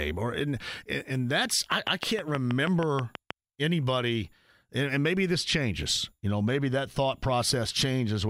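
Speech recording. From 1.72 to 3.32 s, after "or and and that's", a train of clicks sounds. About ten evenly spaced pops, 6.3 per second, stand out loudly, likely from electrical interference.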